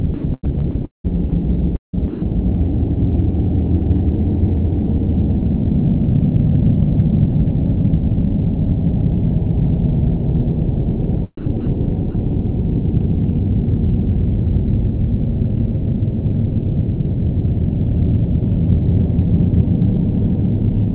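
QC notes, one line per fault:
0.14–1.06 s, 1.76–2.22 s and 11.37–11.67 s, sound chopped by the voice detector: in each stretch the sound breaks up, with about 445 ms, 310 ms and 140 ms respectively replaced by a smooth, hiss-like fill. The likely cause is the sender's voice detector flipping between sending and muting. Quieter parts of the sound were judged to be background, and comfort noise was generated in their place.
1.30–1.32 s and 12.11–12.15 s, sound dropped by the voice detector: brief gaps of 20 ms and 40 ms where the sound gives way to flat noise before resuming. This likely comes from the voice detector treating a faint moment as background and stopping transmission. The receiver filled the hole with comfort noise until the detector triggered again. The fill is band-limited like the rest of the audio, with nothing above 4 kHz, which fits a narrowband call codec.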